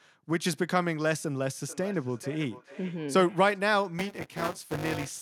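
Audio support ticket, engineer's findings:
Feedback echo between two devices, 1.63–3.63 s. Sound returns about every 0.4 s, peaking at about −19 dB below the speech. Probable cause: a second endpoint in the same room replays this feed into a live mic; the local echo canceller cannot cancel another device's playback.

Buffer tearing, 3.99 s to end of clip. A robotic 200 Hz buzz, which fits 5 ms playback periods. Probable cause: audio driver write pointer and hardware read pointer have slipped. Roughly a fifth of each period replays audio about 15 ms stale, with hard splices at both edges.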